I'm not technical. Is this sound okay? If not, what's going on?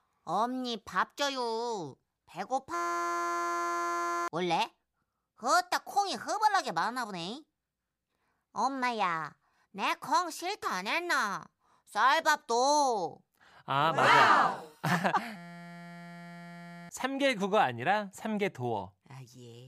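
No. At 2.74 to 4.28 s and again at 15.36 to 16.89 s, the speech stops and becomes a steady, harsh buzz for about a second and a half. This is a system hang loop: the computer briefly froze while the sound hardware kept replaying the same tiny 5.8 ms slice, 172 times a second.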